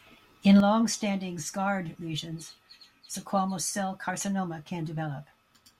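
A sudden gain jump at 0.60 s drops the whole signal by about 6 dB, and the lower level holds until the clip ends. The speech and the background noise fall together in one step, with no fade between the two levels, so the change lands between one sample and the next rather than across a ramp. The likely cause is a digital gain setting or bit shift applied instantly, with no smoothing.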